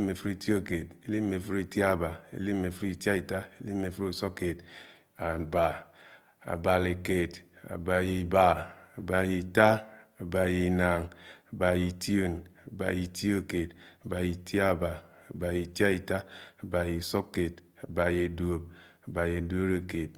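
Throughout the speech, the signal has likely been through Opus compression in CELT mode at a low rate, consistent with about 24 kbps. Starved bands are filled with folded or noise-like content, so tones sound plainly rough and grainy, though bandwidth reaches 20.2 kHz.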